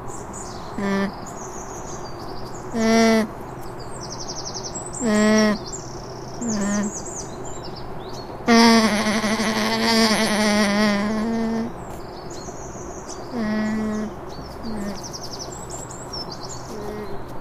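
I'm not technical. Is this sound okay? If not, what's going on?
Yes, this sound is okay, and there's nothing going on with it that needs fixing.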